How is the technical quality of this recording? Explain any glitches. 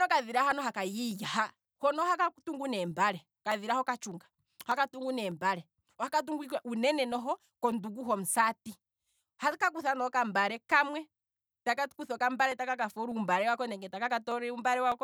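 The recording is marred by regular clicks. From 0.52 s to 14.92 s, about thirty clicks land on a steady 0.6 s grid while the speech runs. These are clock drift buffer slips. The likely cause is two devices running on independent clocks, mismatched by several hundred parts per million. The buffer between them fills or drains until a small block of samples is dropped or repeated, which breaks the waveform. Unlike packet-loss dropouts or random crackle, the slips come at exact, evenly spaced intervals.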